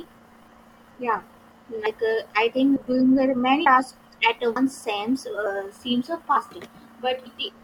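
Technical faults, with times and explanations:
1.86, 3.66 (just after "doing the many"), 4.56, 5.46 and 6.36 s, audio missing between chunks: the speech abruptly skips ahead at a steady beat, each jump dropping roughly a tenth of a second with no gap. This is likely from a recorder losing audio as it switches between 1-second chunks.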